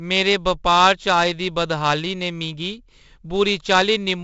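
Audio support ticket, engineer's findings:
Gritty hiss riding every loud syllable throughout, smeared attacks, nothing above 7.8 kHz: heavy 4-bit ADPCM compression, error tracking level, which fits a 16 kHz rate around 64 kbps.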